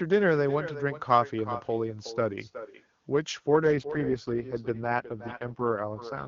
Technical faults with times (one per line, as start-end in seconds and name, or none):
0.00-6.27 echo with no canceller
3.64-6.27 AMR rate drop